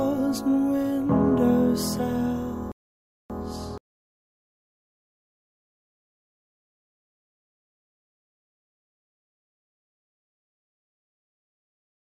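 At 2.72 s the audio cuts to silence and stays silent until 3.30 s, a gap of about 0.58 s. This is a playback stall, likely the player running short of data or its output thread being blocked, leaving nothing to send to the output until it recovered.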